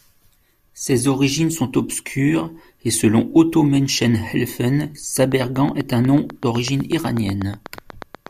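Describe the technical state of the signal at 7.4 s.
At 7.4 s you're right in the middle of a train of clicks that runs from about 5.2 s to 8.28 s. It's a steady tick, about 8 per second and evenly spaced, somewhere around thirty clicks in all, each poking a few dB above the speech and carrying through the gaps too. That regular, same-shaped pulsing most likely comes from interference from nearby equipment or a faulty connection or power supply.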